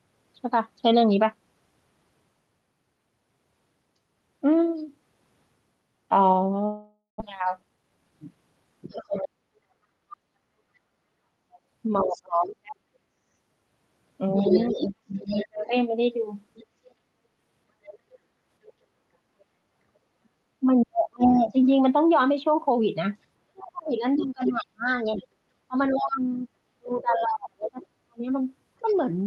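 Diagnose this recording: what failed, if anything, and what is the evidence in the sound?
Long network dropout, 6.65 to 7.22 s, at the network stage. The sound stops arriving and the receiver fills the gap by extending what it last had, a buzzy continuation that fades over roughly half a second, followed by about 140 ms of near silence. The most likely cause is lost or badly delayed packets. When the audio resumes, about 400 ms of the original is missing, and the speech picks up at a later point.

Jitter buffer speed-up, 7.32 to 8.36 s, in the receiver's buffer stage. Right after the dropout, the backlog that built up is drained by cutting out many short pitch-period slices. For about a second the speech runs at roughly 112% speed with unchanged pitch, so it sounds hurried. Around 150 ms is removed in total, which matches the size of the delay jump the gap left behind.

Other side's voice leaking through, 8.90 to 28.95 s, in call processing. 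A second talker is audible underneath the main one, about 10 dB lower, and stays for most of the remaining audio. It sounds like loudspeaker playback picked up by the microphone that the echo canceller did not fully remove. Residual echo from inadequate cancellation is the likely cause.

Speech suppressed in double talk, 8.94 to 15.73 s and 20.22 to 28.95 s, also in call processing. While both voices overlap, the main talker repeatedly dips, thins out or drops away in pieces, falling by up to about 40 dB. This adds up to roughly 3 s in the first span and 4 s in the second. Most likely the echo canceller cannot separate near speech from echo, so it attenuates both together.

Background gated by the echo canceller, 10.19 to 10.35 s and 18.31 to 19.72 s. The room tone suddenly pumps down while the loudspeaker is active and then recovers. The first gate is brief and deep, about 27 dB. The later one is shallow, about 6 dB, and totals about 200 ms. 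Both come from the canceller clamping the microphone. Throughout, the audio passes through the Opus call path with a roughly 12 kHz top end.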